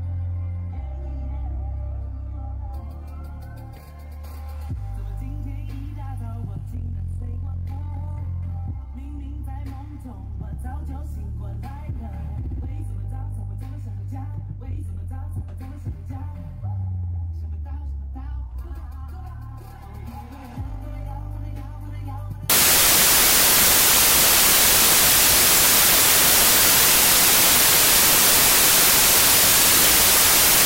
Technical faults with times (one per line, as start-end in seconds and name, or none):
22.50-30.66 wrong sample width